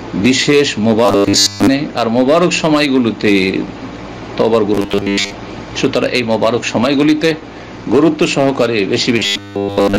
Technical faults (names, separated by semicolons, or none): robotic sound from repeated short buffers